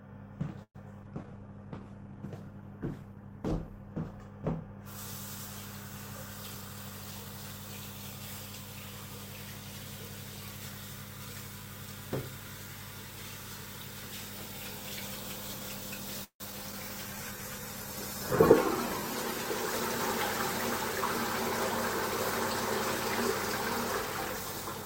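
At 0.63 to 0.78 s the sound stalls: a fading continuation, then about 70 ms of silence. This is likely a call audio freeze, where delayed packets emptied the jitter buffer. On the waveform the envelope decays to a flat line, and the audio resumes unchanged, 113 ms late.

From 1.04 to 4.25 s a call bitrate drop takes the encoder from 96 to 17 kbps. The sound turns coarse and muffled, and the spectrogram shows the top edge falling from 20 kHz to 12 kHz.

Inside that stretch, at 1.23 to 1.40 s, short concealed packet loss drops about 40 ms. The patched continuation smears briefly, seen as a blurred patch in the spectrogram.

At 6.47 to 7.26 s a jitter buffer speed-up trims short pitch-period pieces, roughly a tenth of a second in total. Playback runs at 113% speed with unchanged pitch, and the waveform looks compressed in time.

At 16.24 to 16.76 s repeated packet loss (robotic sound) leaves three gaps, the longest 164 ms, with a third of the span concealed. 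The result is choppy, with pieces missing, and the spectrogram shows repeated, smeared blocks.

From 16.95 to 17.43 s a jitter buffer slow-down repeats pitch periods, adding 77 ms. Playback runs at 85% speed, drawn out, and the waveform shows stretched, repeated cycles.

From 17.08 to 19.58 s a second call bitrate drop, again 96 to 17 kbps, roughens the sound. The spectrogram's upper detail turns thin and blotchy.

At 24.02 to 24.83 s another jitter buffer speed-up runs at 113% speed, removing roughly a tenth of a second. The sound is hurried, with the same time-compressed look.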